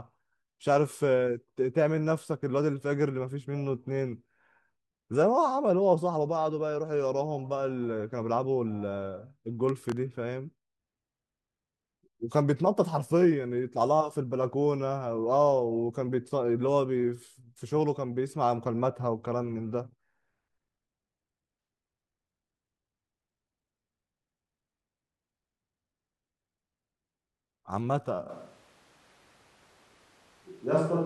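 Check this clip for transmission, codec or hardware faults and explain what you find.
Two faults can be heard: a short burst of crackle early on and a change of microphone near the end.

Processor overload crackle, 9.69 to 9.97 s. The processor briefly fell behind and missed a handful of deadlines for its very short audio buffers, each well under a millisecond long. Each time, it replayed a fragment of stale audio instead of new samples, so every miss left a hard-edged splice. Strung together over that quarter-second, these splices are heard as a gritty, tearing crackle over the speech that stops once the load eases.

Switch to a distant microphone, from 28.3 s to the end. The speech suddenly turns roomy and hollow, thinner in the low end, with room noise now audible at roughly 35 dB below the speech. The overall level stays about the same, so the change is one of tone and space rather than loudness. 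This most likely means the close microphone's signal dropped out and a more distant one, such as a camera microphone, was used instead. The speech never returns to the close sound before the clip ends.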